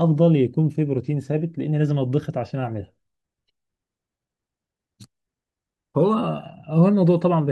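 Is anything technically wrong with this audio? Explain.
No, nothing technically wrong here.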